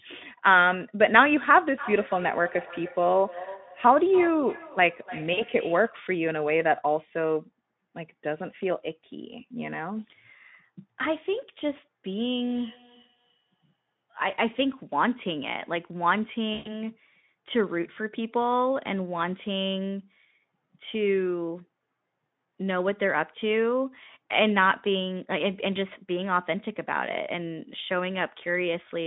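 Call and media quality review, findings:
VoIP packet loss concealed by the speech codec, 5.33–5.44 s and 16.53–16.75 s. Unlike a dropout, there is no silent gap: speech stretches into a fading buzzy tone or coloured noise as the decoder extrapolates its last pitch and filter. Losses are 40 ms and 120 ms, fitting two and six 20 ms frames. Weakness lingers briefly after recovery.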